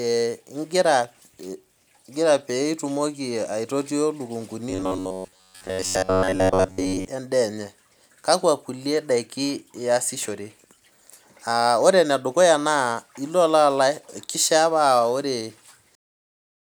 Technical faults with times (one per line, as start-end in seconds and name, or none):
4.70-7.08 robotic sound from repeated short buffers